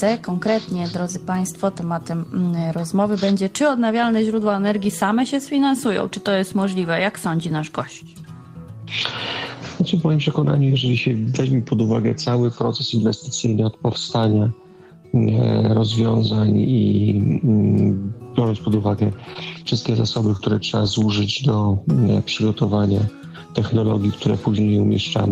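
From 19.23 to 21.07 s there is a burst of lost packets rebuilt from error correction. Twenty-six separate 20 ms frames were replaced by the low-bitrate copies carried in the following packets, so nothing drops out, but the sound turns briefly rough and grainy. On a spectrogram these appear as thin vertical slices with smeared, noisier texture.

Within that burst, at 19.33 s and 20.37 s, two packets never reached the decoder in time, producing short concealed packet loss. The decoder extended the preceding sound for about 15 ms and 22 ms, then blended back, giving a quick smear or wobble.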